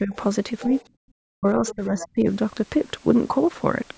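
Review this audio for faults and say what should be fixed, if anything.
Speech suppressed in double talk: the voice dips at 0.00–0.15 s and 0.66–0.70 s, then more deeply from 1.37 to 2.27 s, by roughly 20 dB at worst. The likely cause is an echo canceller that turned everything down while both sides talked. Unlike gating, the talker's own voice is what weakens. A canceller with better double-talk detection would keep the near talker open.

Other side's voice leaking through: a faint second voice, roughly 15 to 20 dB below the talker, appears at 0.61–0.84 s, 1.68–1.75 s and 1.99–2.08 s. It is added sound rather than a loss, which separates it from suppression. It is likely loudspeaker echo left behind by the canceller. Longer echo-tail modelling or lower loudspeaker volume would remove it.

Background gated by the echo canceller: the room sound drops by about 40 dB from 0.98 to 1.09 s and then returns. 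The dip hits the background rather than the voice, and it is brief. This happens when the canceller clamps the microphone while the loudspeaker plays. Using comfort noise instead of hard muting would hide the hole.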